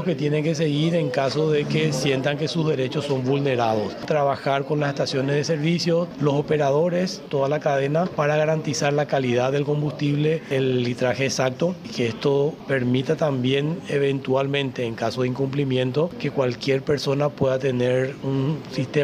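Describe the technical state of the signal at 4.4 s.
At 4.4 s the signal is intact, with no audible fault at that moment.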